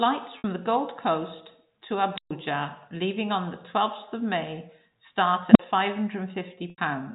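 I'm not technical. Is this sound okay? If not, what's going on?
No. There are two kinds of fault in this speech.

Packet loss with pitch repetition happens at 0.38 to 0.44 s and at 6.70 to 6.78 s. Small pieces of the audio, 60 ms and then 80 ms, never arrived. To fill each gap, the receiving end repeated the last bit of voice it had. You hear a brief held, buzzy sound that fades away quickly before the speech picks up again.

An unstable filter appears at 2.14 to 2.31 s, just before "leaving on the", and again at 5.51 to 5.59 s. A piece of processing that shapes the sound went out of control and fed on itself. The first time, a high squeal near 5 kHz grows very loud within about 38 ms. It then cuts to silence for 128 ms. The second time, a low tone around 200 Hz builds over about 46 ms, followed by a 43 ms silence.

Throughout, the audio has a telephone-line sound with nothing above 4 kHz, from the G.711 telephone coding.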